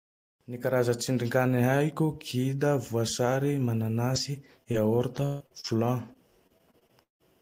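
From about 4.13 s to 7.22 s there's repeated packet loss, giving that robotic sound: thirteen dropouts, the longest around 170 ms, each patched by stretching the previous sound. It comes out choppy and robotic, with roughly 580 ms missing outright.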